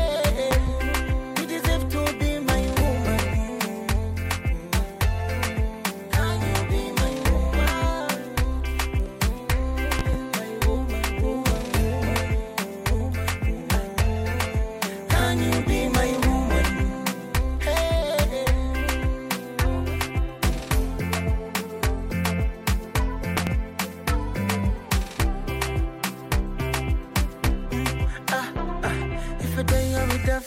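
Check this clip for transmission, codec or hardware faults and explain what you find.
Three loud pops occur, each a pair of sharp thumps, at 0.51–0.70 s, 9.99–10.17 s and 23.37–23.50 s, peaking about 15 dB above the sound. A voltage step, likely from a switch, plug or static discharge, is shaped by downstream circuitry into a brief pulse. Unlike a dropout, the sound continues uninterrupted beneath each pop.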